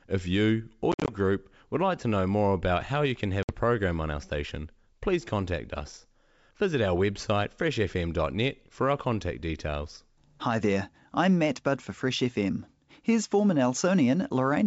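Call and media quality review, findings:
Packet loss on an ADPCM call: 0.92–1.12 s (110 ms lost across 160 ms, longest gap 50 ms) and 3.43–3.52 s (60 ms). Both show as hard-edged silent gaps in the waveform, followed by brief distortion while the decoder's predictor and step size resync. The G.722 wideband path around the gaps sounds clean.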